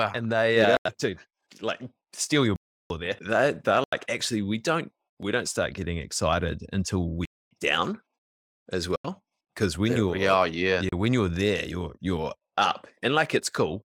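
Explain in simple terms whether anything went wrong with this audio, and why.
Yes, something went wrong. The playback program probably failed repeatedly to deliver sound in time, so blocks of digital silence replaced it at 0.77, 2.56, 3.84, 7.25, 8.96 and 10.89 s. Each causes a brief hole, lasting 30 to 340 ms, including one after "getting excited until we" and one before "when you're there you're".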